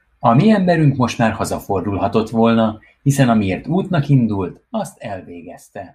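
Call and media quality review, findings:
Zipper noise 4.04–5.12 s, after "hazafordulhatott volna hiszen amiért": audible ticking as level drops roughly 10 dB in unsmoothed steps, about 30 per second. Gain stage applying coarse per-buffer increments without ramping.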